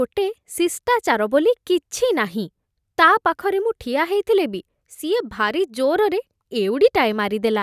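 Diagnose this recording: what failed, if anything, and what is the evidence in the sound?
Listening through the speech, nothing stood out as a fault at any stage of the chain.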